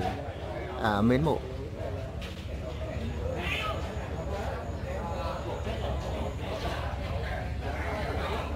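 Repeated frames occur at 2.34 s to 2.42 s, where a 78.4 ms stretch of audio plays once and then plays again immediately. The compressed data for that span was delivered twice, so the decoder reproduced the same slice a second time. The length fits a run of about three codec frames. The result is a brief stutter. The audio runs 78.4 ms longer as a result.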